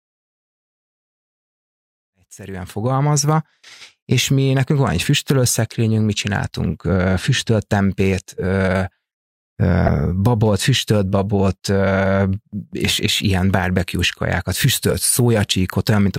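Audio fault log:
9.85–9.89 s, damaged data in a compressed stream: a brief disturbance of about 34 ms just before "babot füstölt babot", where corrupted bytes made the decoder misread frames, lose sync and jump ahead to the next valid frame header, leaving a short glitch.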